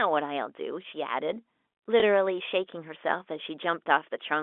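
At 2.00 to 2.02 s the speech has a packet loss with last packet repeated: a single 20 ms stretch went missing and the receiver filled the gap by playing the previous 20 ms again. That replayed segment is unlikely to join the waveform in step with the pitch cycle, and it sounds like a small blip. A silent dropout would leave a clean hole instead. Because only one short repeat occurs here, there is no sustained buzz. The telephone band of roughly 250 Hz to 3.5 kHz from the G.711 line coding frames the sound.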